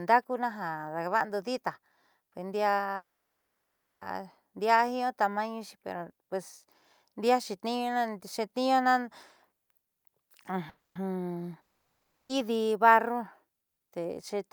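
Call audio freeze at 2.95 s to 4.03 s: the speech stops, the last sound trails off briefly, and nearly a second of silence follows before speech resumes exactly where it left off. Nothing is lost, but everything after arrives 1.06 s later. The likely cause is packets stalling in transit until the jitter buffer ran dry. The same thing happens on a smaller scale at 10.69 s to 10.97 s, a 0.26 s gap that is mostly silent.

Long network dropout at 11.61 s to 12.31 s: after a short fading tail the sound goes silent for about 0.67 s. When speech returns, it has skipped ahead, and the 0.68 s in between never plays. The likely cause is a run of packets that never arrived, so the receiver had nothing to play for that stretch.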